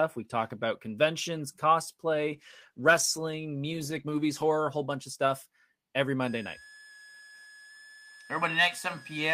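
From 2.34 s to 4.55 s there is a call bitrate drop. The speech turns coarse, watery and dull, and the top end goes missing. It sounds like the encoder fell from about 32 kbps to about 14 kbps, bottoming out for roughly two seconds.

From 6.22 s to the end at 9.33 s, a switching supply whistle sits under the speech. It is a thin, high tone, wandering between 1.64 and 1.73 kHz. It stays roughly 25 dB below the speech.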